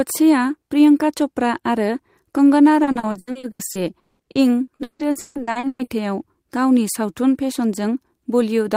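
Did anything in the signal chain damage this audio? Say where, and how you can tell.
Yes, the network stage hurt it: repeated packet loss (robotic sound) from 2.83 to 5.90 s, right after "प्रियंका च'प्रा आरो कंगना". About 22 gaps, the longest 200 ms, get patched by stretching the last sound, so nearly half that stretch is concealment and comes out choppy and robotic.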